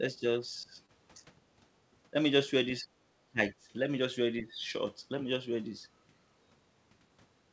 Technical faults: speech suppressed in double talk; short concealed packet loss

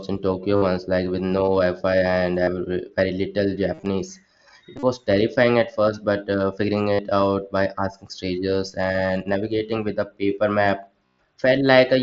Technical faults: concealed Bluetooth headset packet loss

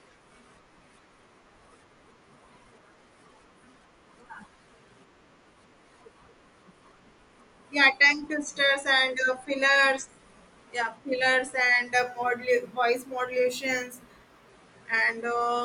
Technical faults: imaging from linear upsampling

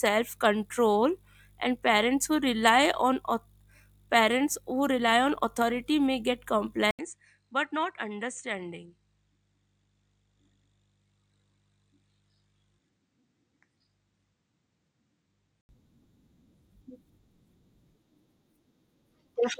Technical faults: input switched to a poorer device

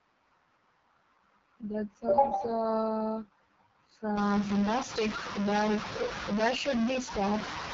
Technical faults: AMR wideband (HD Voice) codec; stuck bit

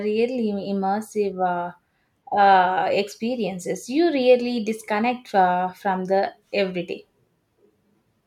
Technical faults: none

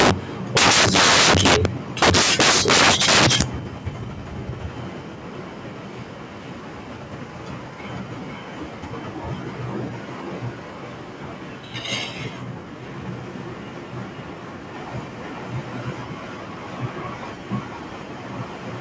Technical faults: integer overflow; echo leak; background gated by the echo canceller

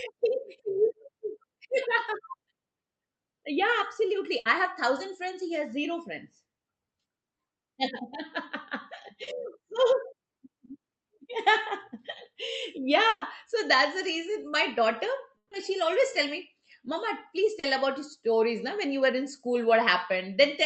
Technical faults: burst of packet loss; short concealed packet loss

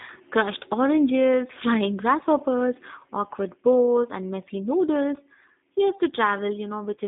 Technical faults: G.729 codec

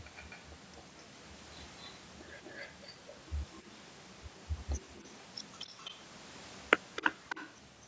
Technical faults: echo leak

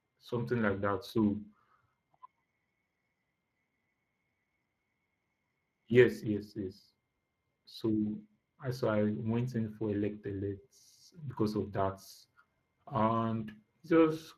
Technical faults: Speex codec

